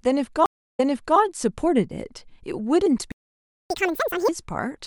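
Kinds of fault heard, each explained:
Stream reconnect: At 0.46 s the speech drops out for about 302 ms, and when it comes back it has jumped backwards, repeating roughly 0.42 s of material already heard before running on normally by 1.18 s. The connection broke, the player fell silent, then reconnected and started a new decoder partway through the stream. The server resent a burst of earlier audio, which is why playback resumes behind where it stopped.
Playback stall: From 3.12 s to 3.70 s the speech simply stops mid-flow, leaving a gap of about 584 ms before sound returns. The likely cause is the player running out of buffered data or having its audio thread blocked, so nothing reached the output until it recovered. Unlike the reconnect, there is no jump backwards here. The silence is a hole in the timeline that the player then has to recover.
Catch-up at higher speed: Right after the stall, from 3.70 s to 4.29 s, the speech races along at twice normal speed with its pitch pushed up by roughly ten semitones, giving a chipmunk-like rush before it settles back to normal. 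Having fallen behind during the stall, the player resamples its backlog to play it faster, recovering the lost time, then returns to the normal rate once it has caught up.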